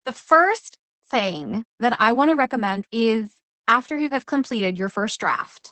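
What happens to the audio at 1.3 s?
The speech at 1.3 s, like the rest of the clip, is passing through Opus voice compression running in its SILK linear-prediction mode at a low rate, which fits a bitrate around 12 kbps. The coder keeps only a wideband signal, so nothing above about 8.6 kHz survives, and it describes the excitation coarsely. The damage is plainly audible: the speech sounds muffled, hoarse and a little robotic, with the crisp top end of consonants gone.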